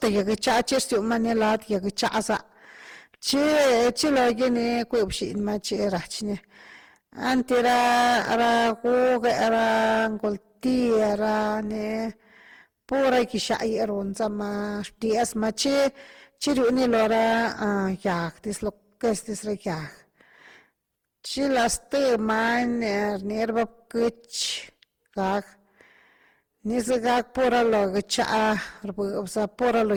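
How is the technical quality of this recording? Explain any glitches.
Poor. Two faults run through the whole speech clip.

Hard clipping is present from start to end. The signal is driven about 15 dB past what the chain can carry. Roughly a tenth of all samples hit the ceiling and are cut flat. Those flattened peaks create strong harmonics high in the spectrum. The result is a constant harsh fuzz on every loud syllable, not just an occasional crackle.

Generation loss is also audible throughout. The sound is swirly, smeared and hollow. Consonant attacks blur and lose their edge. The likely cause is repeated decoding and re-encoding with a lossy codec, many times over. The texture points to Opus at around 64 kbit/s. Each pass quantises again on a shifted frame grid. Noise piles up, so it sounds worse than that bitrate alone would.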